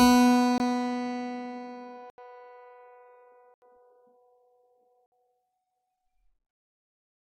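The output buffer likely went unfilled four times, each producing a block of digital silence in the music: at 0.58 s (20 ms), 2.10 s (80 ms), 3.54 s (80 ms) and 5.06 s (60 ms). The sound drops straight to silence and back with no fade.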